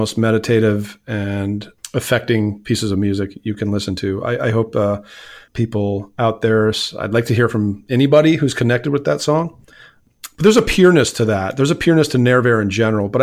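No technical faults can be heard anywhere in the recording.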